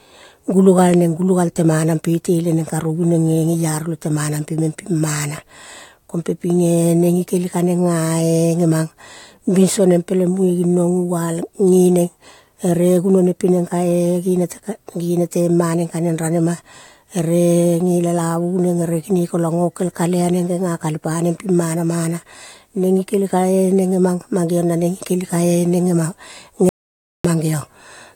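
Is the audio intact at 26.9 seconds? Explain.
No. An audio dropout to silence runs from 26.69 to 27.25 s, about 0.55 s, likely from the input being lost while the recorder kept writing zeros. The speech cuts off abruptly into dead silence with no room tone, then resumes mid-flow. Whatever was said there is gone.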